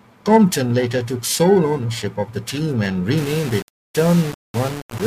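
Speech with periodic clock jitter throughout: a rough, metallic edge on voiced sound that vanishes in pauses, consistent with the converter clock being modulated at around 1 kHz. From 3.18 s, right after "of the team and", to the end, the sound turns grainy and gritty, with error roughly 15 dB below the signal that tracks it. This is likely low bit depth without dither, consistent with rounding to about 5 bits.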